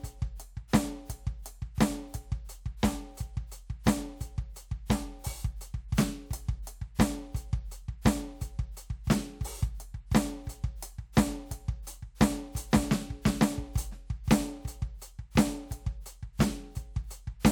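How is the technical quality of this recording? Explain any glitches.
No technical faults are audible.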